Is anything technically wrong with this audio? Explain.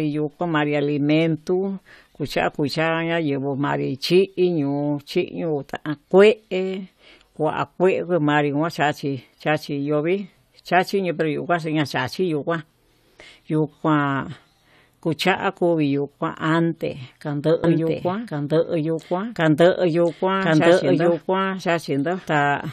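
Yes. From 17.64 s, just after "yuu kuante kando", a doubled audio track starts abruptly and runs to the end. A second, equally loud copy of the speech trails by roughly a second, with no decay. Two copies held out of step are likely the cause.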